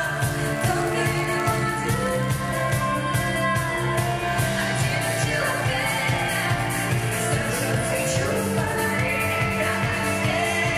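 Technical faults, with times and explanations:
0.00–2.77 s, block size mismatch (padded): a stage hands over blocks slightly shorter than the next stage expects, and each block's shortfall is filled with silence. These tiny dropouts repeat about 91.5 times per second, producing a steady buzz at that rate, and the sound runs about 0.4% slow with its pitch essentially unchanged. The waveform shows brief near-silent gaps at regular intervals. The spectrogram shows evenly spaced vertical striations and a comb of lines at multiples of 91.5 Hz.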